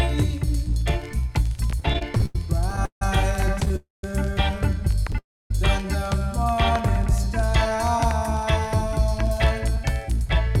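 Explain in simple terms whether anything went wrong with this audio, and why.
Several things went wrong, all from audio arriving unevenly over a network connection.

From 1.70 to 3.71 s there are repeated stalls (stutter). The sound hitches 15 times, each time holding the last bit of sound briefly, the longest hold about 160 ms. Together the holds add roughly 0.4 s, but nothing is lost. The pieces of sound kept arriving late, so the receiver kept running out and having to wait. Unlike a freeze, this is many small catches rather than one long hold.

Two call audio freezes follow, at 3.76 to 4.04 s and at 5.18 to 5.51 s. In each, the sound stops in one piece, held as a short fading buzz that drops to near silence (about 0.17 s of silence in the first, 0.27 s in the second). Then it carries on from exactly where it stopped, with nothing missing. The likely cause is that the incoming sound was held up in transit for roughly 0.3 s. 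A stutter is a string of tiny hitches, but each freeze is one clear gap.

From 6.55 to 7.76 s there is a jitter buffer slow-down. The receiver, short on stored audio, repeated tiny slices of sound to stretch it by about 47 ms. The sound plays at 97% speed, slightly drawn out, but the pitch does not drop. Unlike a freeze, there is no gap, only a gentle drag.

From 9.39 to 10.47 s there is a jitter buffer speed-up, the opposite fix. Having built up too much stored audio, the receiver trimmed away about 40 ms in tiny slices. The sound runs at 104% speed, yet keeps its normal pitch. A sped-up recording would turn higher, and this does not.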